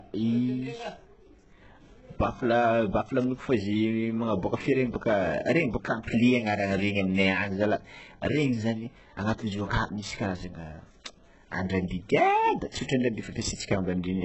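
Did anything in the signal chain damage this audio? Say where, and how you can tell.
Yes, at the codec stage, and the damage runs through the whole clip: HE-AAC compression at a very low rate, likely around 8 kbps. The speech sounds heavily coded, and nothing survives above 8 kHz. Sibilants come out gritty and metallic rather than crisp. The upper band is not the original signal but a copy of lower bands shifted upward and shaped by a coarse envelope, so its harmonics fail to line up with the real ones below the crossover.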